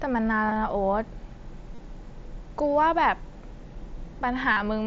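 Concealed Bluetooth headset packet loss occurs at 0.48–0.56, 1.75–1.78 and 4.53–4.57 s. Missing packets get patched with recycled recent waveform. Each sounds like a brief buzzy warble.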